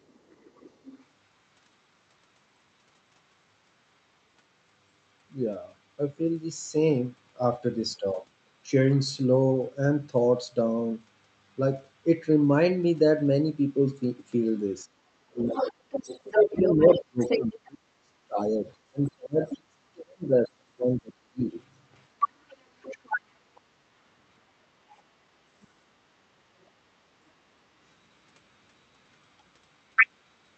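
A faint second voice sits under the opening, from 0.08 to 1.04 s, about 30 dB below the main speech. This is the other side's voice leaking through, likely because the talker's loudspeaker output reached the microphone and the echo canceller didn't fully remove it.

From 15.23 to 16.17 s the main speech sinks sharply, by about 35 dB at its deepest, for roughly a second. This is speech suppressed in double talk. Both parties were talking together, and the canceller likely mistook the near voice for echo and attenuated everything.

The leaked voice returns strongly from 15.53 to 17.69 s, only about 5 dB under the speech, so it competes almost evenly.

A longer suppression follows from 16.5 to 21.54 s. The speech drops in pieces by up to about 40 dB, adding up to about 3 s of gated sound.

Within it, a 40 ms scrap of the other side surfaces at 19.49 to 19.53 s, about 15 dB down. Another loud stretch of leakage runs from 22.2 to 23.19 s, about 5 dB down. 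Two tiny ghosts come at 23.55 to 23.61 s and 25.63 to 25.67 s, each about 35 dB down. All of these carry the Opus call path's band limit near 8 kHz.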